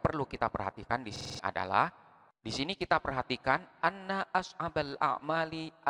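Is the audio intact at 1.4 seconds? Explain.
No. A system hang loop runs from 1.16 to 1.39 s, ending right at that point. The system froze while the sound hardware kept replaying one 46 ms buffer, which fits a 2048-sample buffer. It repeats five times at 21.5 Hz as a rattling stutter, and about 200 ms of real audio is lost.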